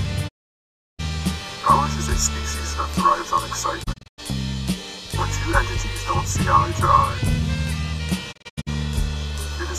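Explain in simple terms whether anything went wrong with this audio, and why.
The sound cuts out three times: one solid gap from 0.27 to 1.01 s, then short, stuttering holes between 3.82 and 4.20 s and again between 8.31 and 8.69 s. This is a digital broadcast dropout. The receiver lost usable signal and muted, so that audio is gone.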